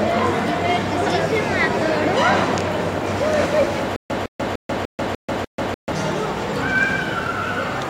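Stutter with silent gaps, 3.96 to 5.92 s: a 158 ms burst returns six times between 138 ms silences, likely a stalled stream replaying its last fragment.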